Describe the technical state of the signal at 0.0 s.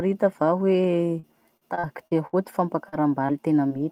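At 0.0 s the speech signal is intact, with no technical fault present at that moment.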